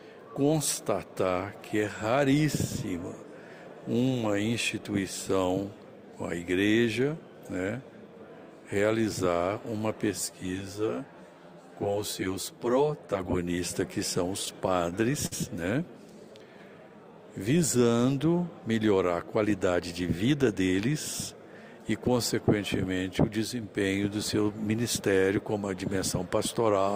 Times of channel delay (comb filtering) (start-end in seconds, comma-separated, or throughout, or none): 10.12-13.73